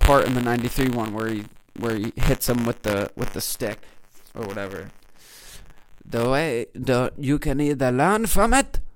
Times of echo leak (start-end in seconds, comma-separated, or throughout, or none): none